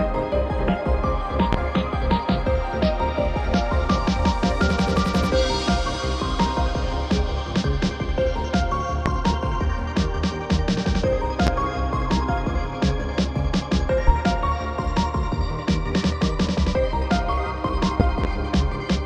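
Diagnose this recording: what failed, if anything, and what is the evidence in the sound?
Loud pops, most likely from the analogue wiring. Sharp single pops, each about 30 ms, hit at 1.53, 9.06, 11.47 and 14.08 s. A double pop spans 18.00 to 18.27 s. Each peaks about 20 dB above the sound, which continues underneath. Voltage steps cause this, from a plug, switch or static.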